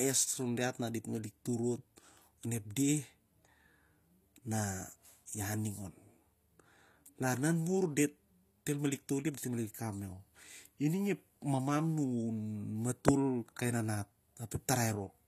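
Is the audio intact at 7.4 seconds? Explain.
No. HE-AAC compression, likely the cause, colours the speech at 7.4 s as it does throughout the clip. The upper band is rebuilt from copied lower bands rather than coded, and the damage is plainly audible. S sounds turn gritty and metallic, nothing is present above 14.9 kHz, and the sound fits a bitrate near 24 kbps.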